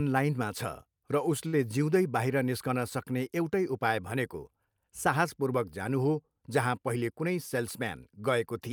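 At 1.47 to 1.55 s, just after "छ र", there is a short stall from a late packet. The jitter buffer ran dry and the last sound was stretched by about 56 ms, briefly held with a faint buzz or dip. Nothing is skipped; the speech resumes exactly where it paused, unlike a loss gap.

From 6.95 to 7.97 s, after "जानु हो जहाँ", a jitter buffer speed-up trims the backlog. Short pitch-period slices, about 70 ms in total, are cut, so the speech runs at roughly 106% and sounds hurried. The pitch stays put, which separates this from a resampling or playback-rate error.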